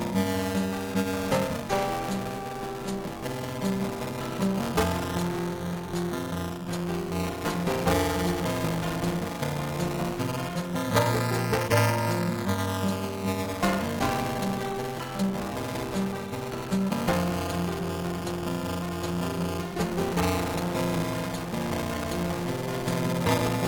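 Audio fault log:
Throughout: buffer tearing, a steady 375 Hz robotic buzz; writer and reader slipped, so about a third of each 128-sample-sized period replays audio a few milliseconds stale.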